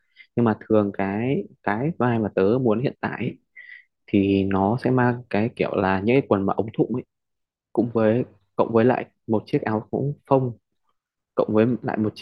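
Two sharp clicks cut through the speech, at 2.16 s and again at 6.89 s. Each is a single tick, a thin vertical line across the spectrum. The likely cause is dropped samples: a couple go missing, so the waveform jumps abruptly.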